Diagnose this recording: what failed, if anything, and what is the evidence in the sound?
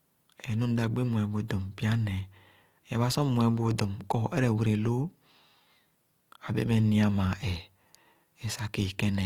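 Codec stage: grainy, rough speech throughout; likely Opus compression near 24 kbps, noise-filling starved bands, seen as speckled spectrogram texture up to 20 kHz.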